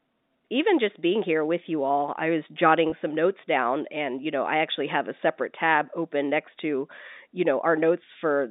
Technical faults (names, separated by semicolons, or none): packet loss with pitch repetition